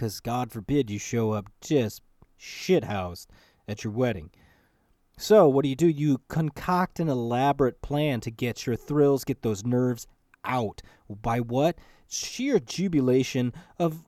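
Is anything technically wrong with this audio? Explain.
No, nothing is technically wrong with this audio.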